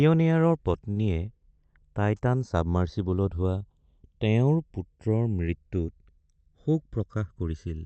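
Speech carried over an Opus call path with its audio band ending near 8 kHz, marked by channels drifting apart across the whole clip. The two channels run on slightly different clocks, mismatched by something like a hundred parts per million, so the delay between them creeps steadily and ends well under a millisecond. Summed to mono, comb notches glide slowly in one direction through the spectrum. That one-way drift separates it from a flanger effect, which sweeps back and forth. From 0.91 to 0.99 s there is a short stall from a late packet. A packet arrived late, the jitter buffer ran dry, and the receiver stretched the last sound by about 49 ms before carrying on from the same point. Nothing is skipped, but a sound hangs too long with a faint buzz or dip. That held, repeated quality separates it from a dropout, which leaves silence or a jump. Overlapping it, from 0.96 to 1.02 s, is a lost packet rebuilt from error correction. 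About 60 ms was played from the low-bitrate copy carried in the following packet, so there is no gap. Those frames sound rougher and noisier than their surroundings. That grainy texture with continuous flow separates it from concealment guesswork, which smears or fades. From 6.92 to 7.48 s comes a jitter buffer speed-up. The buffer held excess audio, and the receiver trimmed short pitch-period slices again and again, roughly 50 ms in total. Playback runs at about 109% and sounds hurried. The pitch holds steady throughout, which separates it from a resampling error, where pitch rises with speed.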